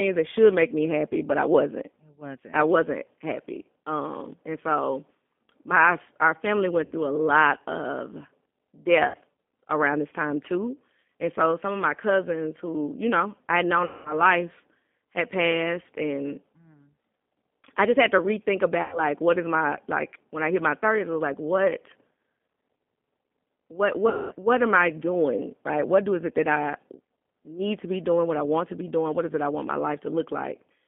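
Across the whole speech recording the G.729 codec, running at 8 kbit/s, is plainly audible. It rebuilds the voice from a vocal tract filter, a pitch predictor and a few pulses per frame, so everything sounds thin, slightly rough and synthetic. On a spectrogram the energy sits in a band from 200 Hz to 3.5 kHz with nothing above, and the harmonics look smeared and grainy.

At 6.86 to 6.94 s and 9.08 to 9.17 s there is VoIP packet loss concealed by the speech codec. Each time, about 60 ms of audio went missing and the decoder repeated its last pitch and filter at falling gain, which stretches the sound into a brief buzzy tone or coloured noise. A longer gap of about 200 ms follows "know I had known" at 13.85 to 14.23 s. Another of about 100 ms sits between "just had to rethink" and "what is my like" at 18.82 to 19.00 s, and one of about 220 ms comes just before "what am I doing" at 24.09 to 24.34 s. 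In these longer gaps the stretched sound fades away, and the voice stays weak just after each one. On a spectrogram the harmonic stripes run flat and unchanging through each gap, and the waveform shows a decaying envelope.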